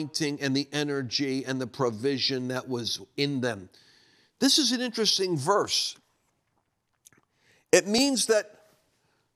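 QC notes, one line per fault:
7.98 s, audio missing between chunks: the recording likely runs in 4-second blocks, and at the handover near the second boundary a sliver of just a few milliseconds was dropped before the next block began. The two sides are butted together with no gap of silence, so the sound jumps forward abruptly at that point rather than pausing. The loss is too short to remove a whole syllable and is heard as a brief skip in the speech.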